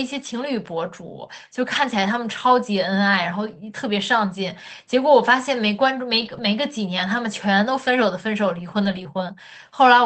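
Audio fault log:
1.75–1.77 s, 6.21–6.43 s, 7.87–7.89 s, 8.83–9.01 s: lost packet rebuilt from error correction. The decoder played the low-bitrate backup copies carried in the following packets, so there are no gaps, but the audio turns rougher and noisier for 20 ms, 120 ms, 20 ms and 100 ms.
9.03–9.07 s: short concealed packet loss. With no backup copy available, the decoder extended the preceding sound for 13 ms of the missing 20 ms, then blended back into the real audio. This leaves a brief smear or wobble within the Opus call band, which tops out at 8 kHz.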